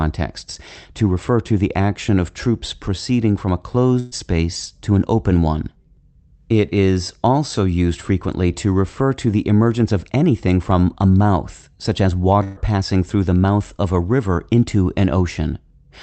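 At 3.99 to 4.14 s and again at 12.43 to 12.62 s the speech hits a burst of packet loss. Roughly 120 ms of audio never arrived, so the receiver stretched the last sound into a held buzz or fading hiss for about 0.12 to 0.13 s, then jumped ahead. On a spectrogram each gap shows frozen, smeared horizontal bands that fade out, below the call path's 8 kHz ceiling. The waveform shows a decaying, unnaturally steady stretch before speech abruptly resumes.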